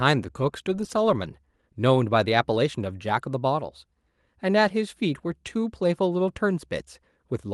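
No technical faults can be heard in this recording.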